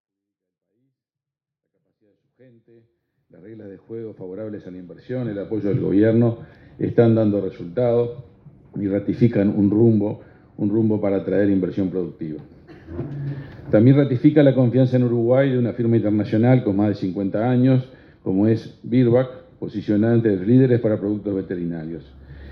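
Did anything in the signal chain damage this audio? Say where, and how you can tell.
No, nothing in the chain seems to have hurt this audio; the only thing of note is a smooth fade-in from the very beginning that reaches full level at about 5.5 s, which is just an editor's touch rather than damage.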